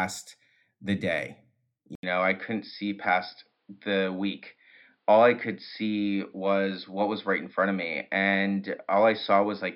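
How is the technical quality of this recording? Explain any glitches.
The speech turns duller at 1.95 s, after a brief 80 ms gap, and stays that way to the end: nothing above 5.2 kHz remains, a faint new background noise sits well below the speech, and loudness barely changes. Likely cause: input switched to a poorer device mid-recording.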